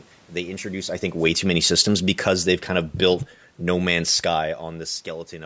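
Just after "introduce I think", at 1.12 s, the speech and its room background begin sinking together, settling about 6 dB quieter by 4.59 s. This is automatic gain falling: the gain control judged the input too loud, or its background noise too strong, and gradually lowered its gain.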